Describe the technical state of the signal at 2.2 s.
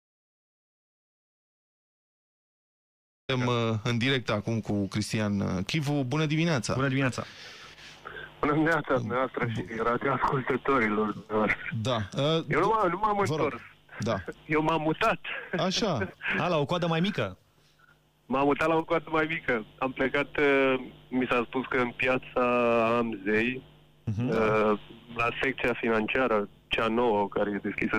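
At 2.2 s the signal sits inside an audio dropout to silence that is already under way when the clip begins and lasts until 3.29 s. The input was likely lost while silence kept being written, so there is dead silence without room tone, a flat waveform line and a blank spectrogram.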